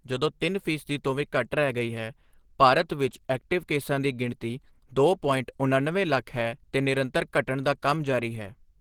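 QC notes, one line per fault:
throughout: Opus compression. The speech was likely squeezed through an Opus encoder at a very low rate, which fits roughly 16 kbps, running in hybrid mode. That mode codes the lower band with the speech-oriented SILK layer and fills the upper bands CELT-style. The bandwidth still reaches 20.2 kHz, yet the codec damage is plainly audible: the speech sounds hoarse and somewhat muffled, and grainy, noise-filled highs stand in for real detail.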